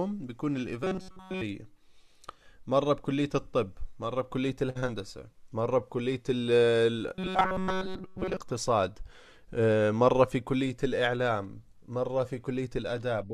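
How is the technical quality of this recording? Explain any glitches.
Two stretches of robotic sound from repeated short buffers mar the speech, at 0.84–1.42 s and 7.15–8.37 s. Both carry a rigid, metallic buzz at 188 Hz, which means a fragment of about 5.3 ms is looping. The likely cause is audio arriving too seldom, with the last fragment replayed to fill the gap. The first stretch is looped throughout, and the second is looped most of the time. A fixed buzz pitch that ignores the natural intonation separates this from codec warble.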